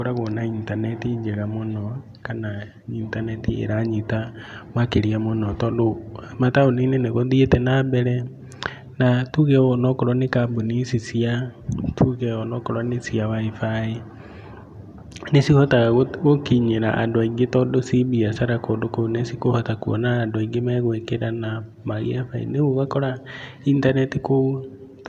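No technical faults are audible.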